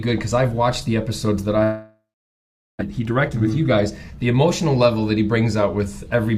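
A long network dropout runs from 1.63 to 2.83 s. The last sound is stretched into a fading buzz, then about 0.77 s of silence. When audio resumes, roughly a second of material is missing, most likely because packets stopped arriving.

A jitter buffer speed-up follows from 2.90 to 4.61 s. To shed the backlog built up around the gap, the receiver cuts short pitch-period slices repeatedly, removing about 150 ms. The sound plays at 108% speed, hurried but at unchanged pitch.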